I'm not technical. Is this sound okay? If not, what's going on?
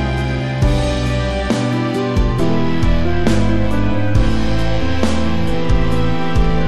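No. At 2.40 s there's a single low thump, and the sound carries on as before. That's a DC step: the waveform's resting level suddenly jumps off centre and stays shifted until the end, so you hear the jump itself rather than any change in the sound.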